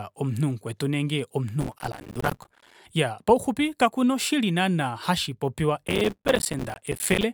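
A speech clip with two bursts of processor overload crackle. The first runs from 1.61 to 2.75 s, after "omunhu mukwetu nenge". The second runs from 5.87 to 7.23 s, after "kakuna oshili naana hashipopiwa". Many tiny buffers, a few milliseconds each, miss their deadlines. Each drops to silence with hard edges, giving gritty tearing.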